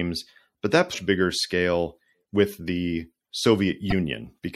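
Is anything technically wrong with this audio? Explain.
Yes. Throughout the speech there is plainly audible MP3 compression, likely at a low bitrate around 64 kbps. Weak detail swirls and smears.

Damaged data in a compressed stream occurs at 0.90–0.95 s, between "but that" and "bigger scale", and again at 3.90–3.93 s. The decoder loses frame sync there, producing brief glitches.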